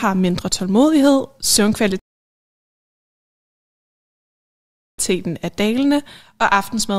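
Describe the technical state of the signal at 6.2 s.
At 6.2 s the speech signal is intact, with no dropout, distortion or other fault to be heard at that moment.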